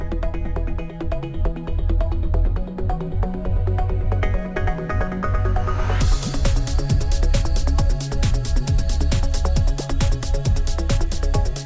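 Aliasing runs through the whole sound: high content folds back below a hard edge near 8 kHz, which points to a drop to a 16 kHz rate without an anti-alias filter. Unlike simple band-limiting, which only dulls, these mirrored tones, about 25 dB below the signal, add gritty, metallic, unrelated pitches.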